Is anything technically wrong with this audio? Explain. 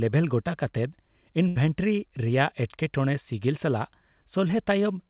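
Yes, two packet-loss faults interrupt this narrowband speech, which has nothing above 4 kHz, consistent with a G.711-style call codec.

From 1.48 to 1.58 s there is a burst of packet loss. About 80 ms never arrived, so the receiver extended the last sound and faded it out, giving a held, dimming buzz or fading hiss. A spectrogram shows the extended sound decaying.

From 4.48 to 4.51 s, short concealed packet loss leaves a roughly 20 ms hole patched by continuing the preceding sound, then blending back. It sounds like a brief smear or wobble, visible as a slight blur.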